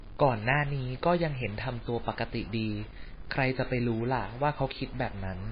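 Speech throughout, with a likely stuck bit in the converter or data line, where one bit stays fixed and throws off about half the values, giving distortion and noise filling the pauses. Heavy MP3 compression is also likely, at a bitrate that sounds like roughly 18 kbps, so the sound turns watery and swirly, with smeared attacks. At 1.88 s, dropped samples are the likely cause of a single sharp click, where roughly one sample goes missing and the waveform jumps.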